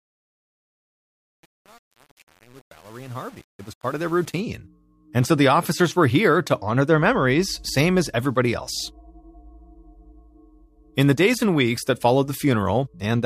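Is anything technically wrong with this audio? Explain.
Yes. From 0.0 to 4.4 s, the fade at the start suffers truncation distortion on a fade. The gain stage drops low-order bits without dither, which fits about 7 bits of resolution, so the quiet part collapses into coarse square steps. It sounds gritty. Unlike noise or dropouts, the grit tracks the fade's level.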